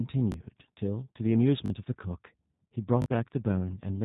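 Right from the start the speech has that G.729 codec sound: plainly rough and synthetic, with nothing above about 3.8 kHz, which points to an 8 kbit/s voice link. At 0.32 to 0.34 s there's a repeated buffer, a short chunk played once more with hard joins, fitting a 20 ms buffer. The same stutter hits at 1.66 to 1.70 s and 3.02 to 3.06 s, each chunk playing twice extra and costing around 40 ms of fresh audio.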